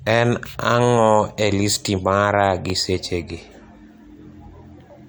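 A speech recording with nothing technically wrong to point to.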